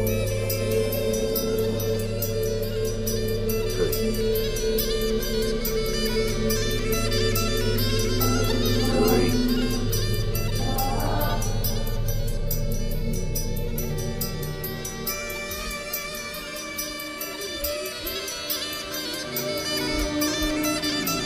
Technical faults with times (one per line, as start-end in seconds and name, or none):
none